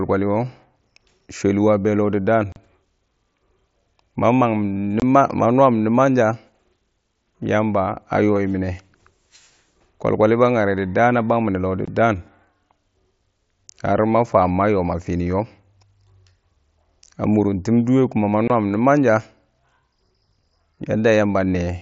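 Unconcealed Bluetooth headset packet loss opens holes in this speech at 2.52 s (37.5 ms), 5.00 s, 11.85 s and 18.48 s, the last just after "dʊwɛ ku ma" (22.5 ms each). Voice packets travelling between headset and phone went missing, and nothing was synthesised to cover them. Each gap therefore drops to silence or an idle pattern with abrupt edges, and the gap lengths fit whole 7.5 ms headset frames. The audio passes through the wideband mSBC headset codec, which caps the speech near 8 kHz and adds a light grain.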